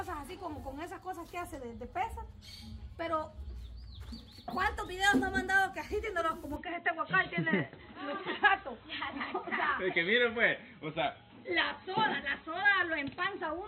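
Input switched to a poorer device at 6.56 s, running to the end: with no gap and little level change, everything above 4.1 kHz vanishes and the sound turns dull and boxy, with a faint new noise floor, likely from capture moving to a narrower-band microphone or headset profile.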